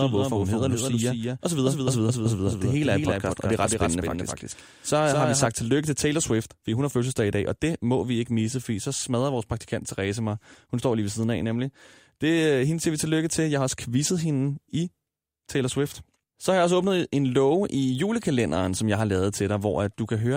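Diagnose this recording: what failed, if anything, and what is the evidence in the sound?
A doubled audio track runs from the start until 5.46 s, just before "tillykke til". A dry, full-band copy trails about a fifth of a second behind, a few dB down, then cuts off abruptly. A slower second capture path was likely mixed in.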